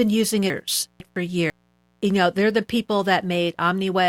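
A mains buzz runs through the whole recording at around 40 dB below the speech. Switching spikes from a dimmer, rectifier or unshielded cable get in twice per cycle of the 60 Hz supply, so the interference is rich in harmonics that climb to several kHz rather than sitting as a pure hum. It sounds like a steady, raspy buzz under the speech. On a spectrogram it shows as a comb of thin horizontal lines at multiples of 60 Hz, unbroken from start to end.

Between 0.5 and 1.5 s, chunks of audio play out of order. The stretch is made of two 500 ms chunks, and the first of them arrived or was written one chunk late, so the audio from 1.0 to 1.5 s plays before the audio from 0.5 to 1.0 s. Nothing is missing, but the sequence is wrong, and the passage leading into "you know they're the" sounds jumbled. There are hard joins at 0.5, 1.0 and 1.5 s. On the waveform they appear as abrupt jumps in level and shape. 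On a spectrogram they appear as sharp vertical seams where the harmonic contours break off and restart.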